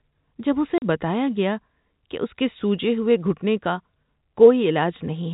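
Speech over a narrowband telephone line, with the top end cut off around 4 kHz as G.711 coding does. At 0.78 s there's a hard 40 ms hole, from packet loss filled with silence. It fits two lost 20 ms packets.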